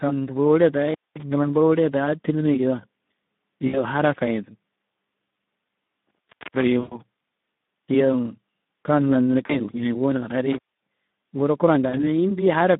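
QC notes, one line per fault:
throughout: Speex codec. The speech is hoarse and noisy because this CELP coder has too few bits to rebuild the excitation cleanly, which fits a rate around 11 kbps. The band runs only from 150 Hz to 3.7 kHz, so the speech sounds narrow and telephone-like.
0.87–1.23 s, 6.07–6.63 s, 10.52–10.87 s: intermittent contact. A loose connection opens for about 215 ms, 365 ms and 243 ms respectively. The audio drops out with a crackle at each edge as the contact breaks and remakes, leaving faint hiss in the gaps.
3.67–3.80 s, 6.80–7.00 s, 9.45–9.60 s, 11.89–12.03 s: VoIP packet loss concealed by the speech codec. About 60 ms, 120 ms, 40 ms and 40 ms of audio is missing, which fits runs of 20 ms frames. The decoder repeats its last pitch and filter at falling gain, so the sound smears into a fading buzzy tone or coloured noise and stays weak briefly after each gap.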